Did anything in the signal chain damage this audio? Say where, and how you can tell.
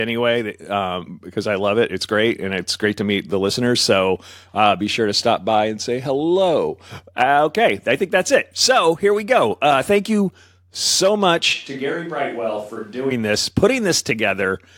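Yes: at the capture stage, the close microphone likely dropped out, leaving a distant one from 11.55 to 13.10 s. The speech abruptly turns roomy and thin, roughly 5 dB quieter, with more background noise.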